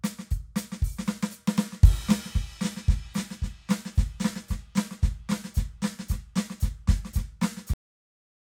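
Music that stops mid-sound at 7.74 s and drops straight into digital silence with no decay: a cut-off end, where the final buffers were never written or played back.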